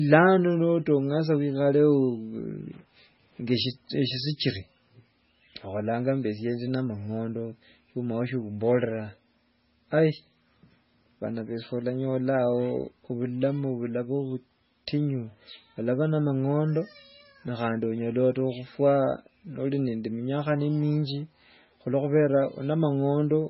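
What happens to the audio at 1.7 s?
At 1.7 s the speech carries MP3 compression throughout the clip, likely at a very low bitrate near 16 kbps, with nothing above 5.6 kHz and watery, swirling artefacts as weak frequency lines drop in and out.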